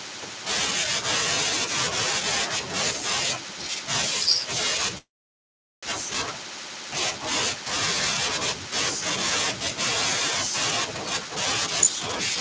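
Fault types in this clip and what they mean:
Call audio freeze: From 4.98 to 5.85 s the sound stops. A short trace of the last sound fades, then about 0.77 s of silence follows. The audio resumes where it left off, 0.85 s late. Held-up packets likely emptied the jitter buffer.
Jitter buffer speed-up: From 11.29 to 12.36 s the sound runs at 107% speed. The pitch stays the same, so it just sounds hurried. The receiver cut out tiny pitch-period slices, about a tenth of a second in total, to shrink an overfull buffer.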